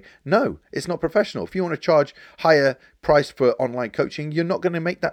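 No technical faults turn up anywhere in this bit of speech, so there's nothing to walk through in time order.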